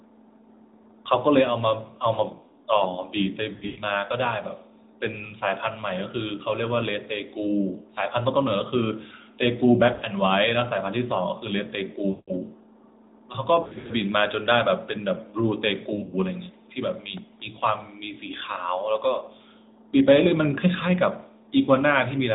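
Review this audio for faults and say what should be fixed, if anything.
Lost AMR speech frames occur at 3.54–3.83 s, 9.94–10.06 s, 12.10–12.34 s, 13.62–13.93 s and 15.96–16.15 s. Radio errors corrupted frames, so the decoder rebuilt each gap from the last good pitch and vocal tract settings at falling gain. At 3.54 s about 200 ms is lost across 240 ms, with a 120 ms run that drags out and fades. At 10 s 80 ms is lost, at 12.1 s 180 ms, and at 13.6 s 180 ms in runs of up to 60 ms scattered over 280 ms. At 16 s 100 ms is lost across 160 ms. These short dropouts sound as warbles and dips, and the speech returns rough for a moment. On a spectrogram, harmonics stretch flat and dim toward nothing, all below the narrowband codec's 4 kHz ceiling, then restart abruptly. The waveform shows a decaying, overly regular envelope. Stronger channel coding or a better radio link would prevent this.

A repeated buffer at 17.17 s played the last 1.33 ms block of audio twice more, which fits a 64-sample buffer. 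It is heard as a tiny click or buzz rather than a stutter, and a few milliseconds of audio are lost. The waveform shows the same short cycle copied end to end with hard joins. The spectrogram shows a thin vertical broadband line. A larger playback buffer or higher-priority audio thread would stop the underrun.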